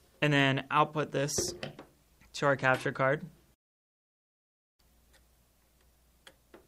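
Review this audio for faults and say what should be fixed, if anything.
Rebuffering stall from 3.54 to 4.79 s: playback drained its downloaded audio, fell silent for 1.25 s, then resumed at the same point, losing nothing but adding time. To prevent it, keep a larger playback buffer ahead of the playhead and lower the stream's bitrate when the connection can't keep pace.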